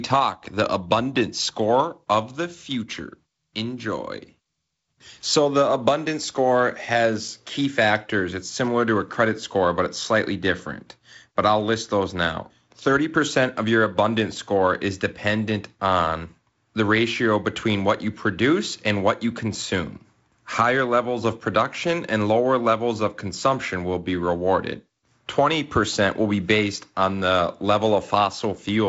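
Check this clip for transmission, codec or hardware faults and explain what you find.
I find no transmission, codec or hardware faults in this clip.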